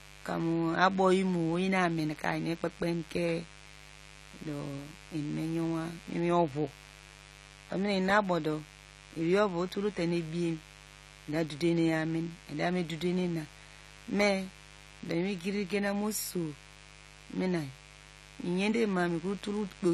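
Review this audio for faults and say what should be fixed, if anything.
A steady, raspy mains buzz runs throughout, about 20 dB below the speech, from switching spikes at 50 Hz harmonics; shielding and clean power would prevent it.

The speech sounds dull and smeared, with nothing above 14 kHz, most likely AAC compression at a low bitrate; encoding at a higher bitrate would avoid this.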